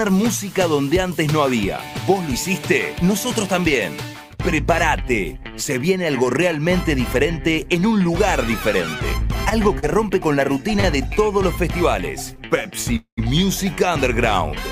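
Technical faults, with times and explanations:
9.49 s, 9.79 s, 10.80 s and 12.36 s, short stall from a late packet: at each point a sound is briefly held on longer than it should be, with a faint buzz or dip, about 20 ms at 9.49 and 12.36 s and about 30 ms at 9.79 and 10.80 s. The receiver's jitter buffer ran dry when a packet came late, so it stretched the last bit of audio until the packet landed and then resumed from the same spot. Nothing is lost, but each stall pushes the audio a little later.
12.96–13.20 s, call audio freeze: the sound turns into a buzz or hiss that fades away and then falls silent for about 100 ms before the audio picks up again, roughly 214 ms of fill in all. The likely cause is packets held up in transit long enough to empty the jitter buffer. The receiver kept generating a decaying continuation of the last sound and then gave way to silence. When the packets arrived it carried on from where it had stopped, so a gap was inserted and no audio is missing.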